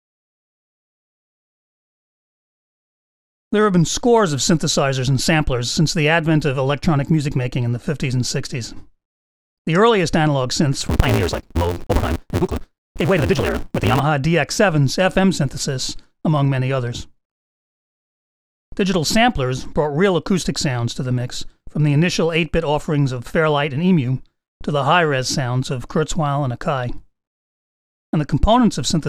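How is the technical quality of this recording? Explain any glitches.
The recording has one clear technical fault, a block size mismatch with truncation, between 10.80 and 14.00 s. One stage writes longer blocks than the next stage reads, so the tail of every block is discarded. The 172 Hz buzz fits a 256-sample read block. With material dropped, the audio runs about 1.88 times fast at roughly its normal pitch, with a buzz at the block rate. A spectrogram would show evenly spaced vertical lines at 5.8 ms intervals with harmonics stacked above. The waveform would show small discontinuities every 5.8 ms.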